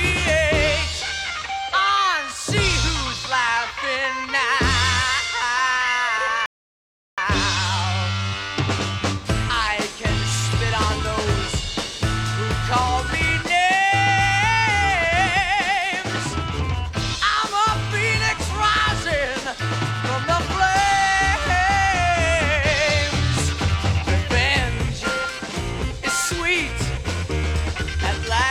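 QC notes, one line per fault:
6.46 to 7.18 s, rebuffering stall: playback drops to silence for about 0.72 s, then picks up at exactly the point where it stopped, with nothing skipped or repeated. The player exhausted its downloaded audio and had to wait for more data before continuing, so the gap is inserted dead time rather than missing material. Everything after the stall runs about 720 ms late relative to the original timeline.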